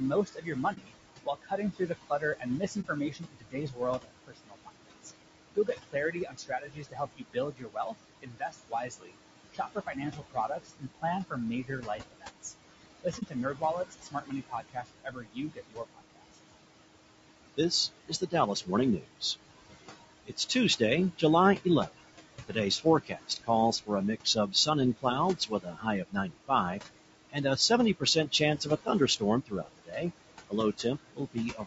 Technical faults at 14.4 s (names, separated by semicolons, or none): noise suppressor artifacts; low-delay AAC compression; speech cut by the noise suppressor